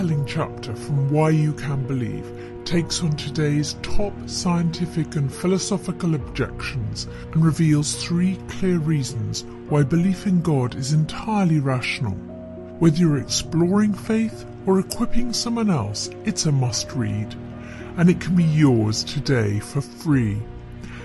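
Throughout the audio there is a wrong sample rate fault: everything runs slow and sits low, at about 0.73 times normal speed and 5.55 semitones flat. Speed and pitch drop together by the same ratio, which fits 44.1 kHz material played back at 32 kHz without conversion. On a waveform, every event is stretched out in time. On a spectrogram, all features shift down in frequency, and the content tops out near 16 kHz.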